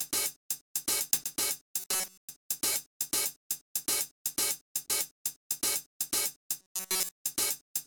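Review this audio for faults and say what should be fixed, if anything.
Robotic sound from repeated short buffers, from 1.80 to 2.29 s and again from 6.62 to 7.11 s: the sound turns into a rigid, metallic buzz at a steady 188 Hz. A period of about 5.3 ms is being replayed over and over in place of fresh audio, so the buzz pitch follows the loop length rather than the sound itself. Most of the first stretch and all of the second is loop, which likely means input arrived too slowly for the playback side. To prevent it, give the audio thread enough priority and a larger buffer so data arrives before it is needed.

Lost LE Audio frames, at 2.73 to 2.75 s and at 4.88 s: each gap is a brief grainy smear of about 20 ms, which fits two 10 ms LC3 frames going missing over the Bluetooth link. Nothing was received, so the decoder filled the gap by reusing the last spectrum with randomised phase. That keeps the level but turns any tonal content into noise for that moment before the real signal resumes. 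To prevent it, reduce radio interference or distance, or use a more robust LE Audio link setting with retransmission headroom.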